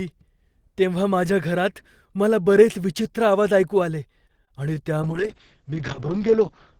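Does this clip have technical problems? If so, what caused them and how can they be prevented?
Yes. From 4.27 to 4.52 s, repeated packet loss (robotic sound) left four short gaps, the longest 20 ms, filled by extending earlier audio. About a quarter of that stretch is concealed, so the sound turns choppy. A steadier network path and a larger jitter buffer or forward error correction would prevent this.

From 5.03 s to the end, a call bitrate drop forced coarser encoding, consistent with a fall from about 32 to 7 kbps. The top end is cut from 20 kHz to 8 kHz, leaving the sound muffled and rough. More available bandwidth, or a higher minimum bitrate setting, would prevent this.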